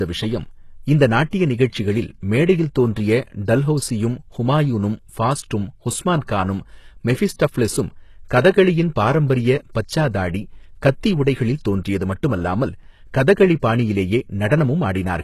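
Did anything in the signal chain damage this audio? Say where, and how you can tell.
Yes. Throughout the speech the treble sounds bright but synthetic: s sounds come out gritty and lispy, and nothing survives above 12.3 kHz. The damage sits at the codec stage, likely HE-AAC compression rebuilding the top band from copied lower bands, which fits about 16 kbps.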